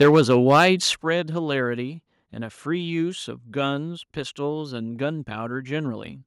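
Right from the start, 0 to 0.69 s, there's microphone overload: the loudest peaks sound crunchy and crackly, with their tops flattened. That's likely the input gain running about 6 dB too hot and slamming into the converter's ceiling on roughly one sample in twenty. At 0.03 s there's a microphone volume stepped down event, and level and background drop together by about 3 dB, then a second, bigger drop of about 8 dB at 1.02 s. It sounds like the call software caught the clipping and pulled the input gain down in two steps.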